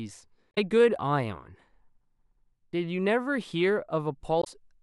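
Damaged data in a compressed stream corrupts frames from 0.51 to 0.58 s and 4.40 to 4.47 s; the decoder loses sync, leaving short blips in the speech.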